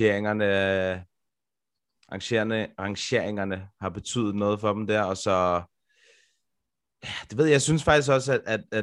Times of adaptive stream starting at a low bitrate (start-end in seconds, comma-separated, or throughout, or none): none